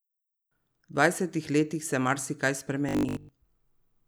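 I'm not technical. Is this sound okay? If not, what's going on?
No. From 2.89 to 3.31 s the speech turns into a stiff, metallic buzz at 50 Hz: robotic sound from repeated short buffers. Most of the real audio there is likely skipped while short 20 ms snippets are replayed over and over.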